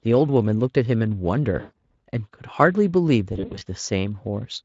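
At 1.59 s and again at 3.33 s there's VoIP packet loss concealed by the speech codec. The decoder stretches its last pitch and filter into a fading buzzy tone or coloured noise. The first is a solid 140 ms gap. The second scatters similar losses over about 280 ms, in runs up to 60 ms. The light Speex coding around them holds up.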